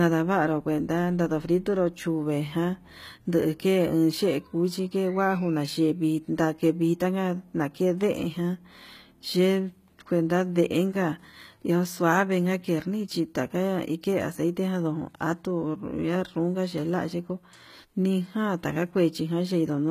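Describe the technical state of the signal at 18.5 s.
At 18.5 s, as across the whole clip, the speech has plainly audible damage, likely HE-AAC compression near 20 kbps. Treble is copied up from lower bands, making sibilants gritty, with nothing above 14.9 kHz.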